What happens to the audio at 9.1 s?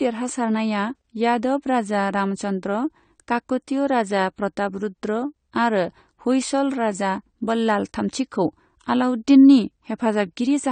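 AAC compression damage is present at 9.1 s, as it is throughout the speech: nothing reaches above 9 kHz, and sibilants turn dull, smeared and fizzy. That suggests a low-bitrate AAC-LC encode, likely near 32 kbps, which lowers the cut-off and coarsely quantises frequency lines.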